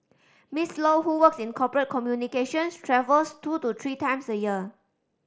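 No technical faults are present.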